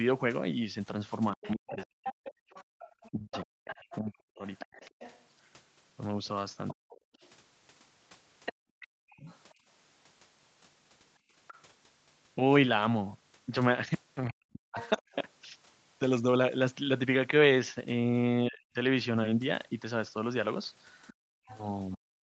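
Speech suppressed in double talk, from 1.33 to 9.58 s: the talker's voice repeatedly sinks, by as much as about 40 dB and for roughly two seconds in total. This is likely an echo canceller that couldn't separate near and far talk and pulled both down.

Other side's voice leaking through, from 1.42 to 11.6 s: a second voice sits about 15 dB under the talker, likely because the canceller left part of the loudspeaker signal in the microphone.

Background gated by the echo canceller, from 2.37 to 2.79 s and from 11.2 to 11.34 s: the room tone drops out hard, by about 39 dB and then about 15 dB, for a fraction of a second each time. The canceller clamped the microphone and then released it.

Speech suppressed in double talk returns from 14.29 to 15.08 s, with about half a second of dips, and the other side's voice leaks through from 14.79 to 15.15 s.

From 18.48 s to the end, the talker is again suppressed by up to about 40 dB. 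From 21.07 s, the far voice leaks in at about 25 dB below the talker.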